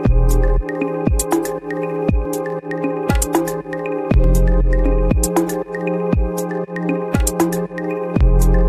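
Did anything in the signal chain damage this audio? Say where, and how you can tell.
Yes. Overlap between stream segments at the playback stage: tiny skips at 2.25 s and 4.24 s, landing near 2-second segment boundaries. Overlapping timestamps made the player discard a few milliseconds of real audio, so the waveform steps abruptly there, showing a thin vertical broadband line on a spectrogram.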